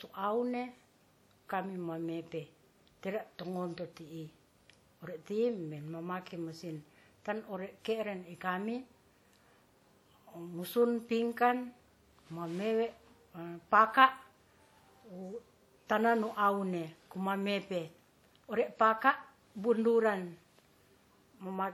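Speech, with plainly audible WMA compression throughout. Detail rings and smears, and hiss breathes with the speech. This likely comes from a WMA 1 encoder at around 48 kbps.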